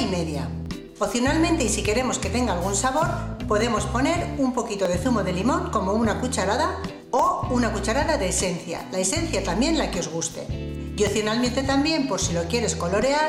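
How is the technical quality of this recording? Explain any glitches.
The recording is marred by six isolated sharp clicks, at 0.66, 1.68, 3.61, 4.85, 7.19 and 11.07 s. Each is a single tick that shows as a thin vertical line across the spectrum. These are most likely dropped samples: well under a millisecond of audio goes missing, so the waveform jumps abruptly from one value to a later one. The gap is far too brief to remove any audible sound. Only the discontinuity is heard.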